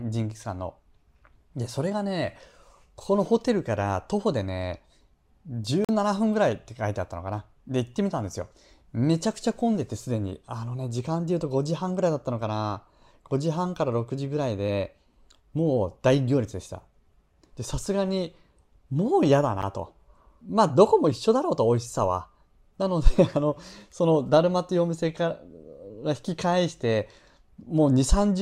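At 5.85 to 5.89 s the speech drops into a block of digital silence lasting about 43 ms, then again at 19.62 s for about 11 ms. Both fit buffers the output wasn't filled in time, matching 2048-sample and 512-sample blocks. Unlike a fade or concealed dropout, each cuts abruptly to silence: the first is a short hole, the second a tick.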